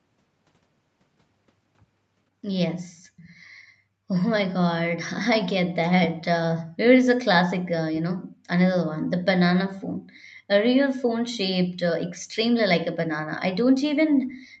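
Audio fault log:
3.17–3.41 s, echo leak: a brief, very faint delayed copy of the speech surfaces 491 ms behind the original, far below the main level. This is likely loudspeaker playback at the far end reaching its microphone, slipping past the echo canceller and returning into the call.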